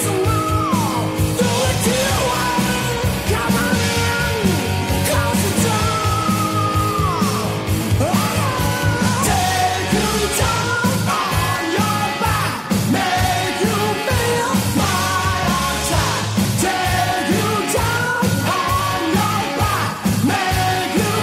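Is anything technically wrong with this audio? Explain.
Yes. Sample clock jitter runs throughout: the converter's clock wanders by around a microsecond, so samples land slightly off time, leaving an error roughly 40 dB below the signal. It sounds like hiss that swells on loud, bright passages and vanishes in silence, unlike a steady noise floor.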